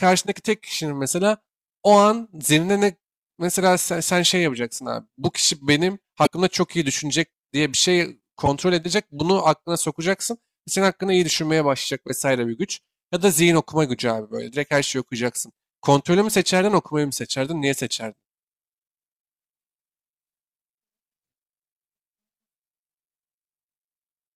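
At 6.23 to 6.27 s, and again at 8.46 to 8.48 s, the speech is broken by short bursts of damaged data in a compressed stream. Corrupted bytes reach the decoder, which misreads the affected frames, loses sync and has to find the next valid frame header before normal output resumes. Each event sounds like a brief synthetic chirp or blip. The first lasts about 40 ms and the second about 20 ms.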